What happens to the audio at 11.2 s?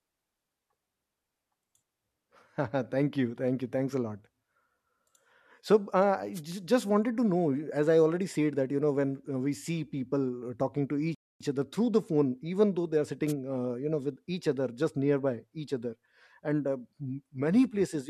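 A rebuffering stall runs from 11.15 s to 11.41 s. The player exhausted its stock of downloaded audio and halted playback while it waited for more data to arrive. The speech drops abruptly into silence for about a quarter of a second, then picks up at exactly the point where it broke off, with "other through the". No speech is skipped or repeated; the pause simply adds 258 ms to the clip's running time.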